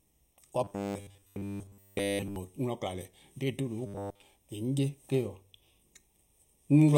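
From the start, the speech has channel delay (comb filtering): one channel runs a fraction of a millisecond late, and the mono sum cancels evenly spaced bands, the first around 1.5 kHz. It sounds hollow and phasey. A spectrogram shows fixed dark horizontal notch lines for the whole clip.

From 0.64 to 2.36 s, and again from 3.86 to 4.22 s, the speech becomes a rigid metallic buzz at 100 Hz, loosely tracking the syllables. This is robotic sound from repeated short buffers, likely caused by a 10 ms slice of audio being replayed in place of missing input. The repeats fill most of the first stretch and all of the second. The spectrogram shows stiff, evenly spaced harmonic stripes, and the waveform shows identical 10 ms cycles.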